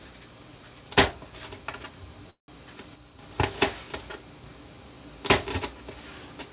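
At 2.3 s the sound stalls for about 0.2 s: the last moment is stretched into a brief fading buzz that drops to near silence for around 130 ms before the audio resumes where it left off. This is a call audio freeze, likely from delayed packets emptying the jitter buffer.

From 2.96 s to 3.19 s the whole signal, background noise included, abruptly drops by about 6 dB and then jumps back. This is a sudden gain jump, likely a digital level change applied without a ramp.

Nothing above 4 kHz is audible, consistent with the G.711 mu-law call path.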